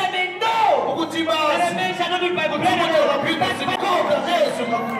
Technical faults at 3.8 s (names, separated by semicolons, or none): CD skip